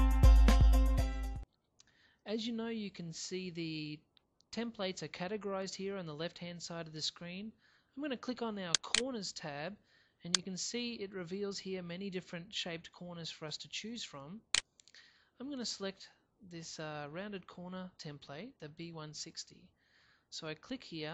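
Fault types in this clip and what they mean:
MP2 compression: The audio was likely squeezed through MPEG Layer II at a low rate, fitting roughly 80 kbps, so its 32 sub-bands were starved of bits; the top end sounds dull and flickering, with a plainly audible gurgling, granular roughness throughout.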